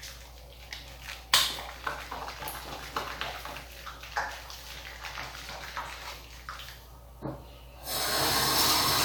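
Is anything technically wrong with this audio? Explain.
No, no technical faults audible.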